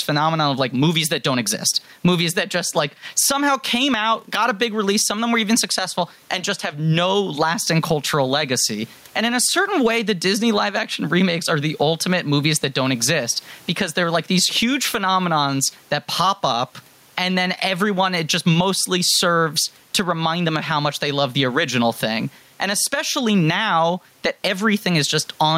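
Gain pumping runs through the whole speech recording, with the gain swinging by about 15 dB. The likely cause is gain set far too high, with a fast limiter clamping down. The room noise sits about 43 dB below the speech.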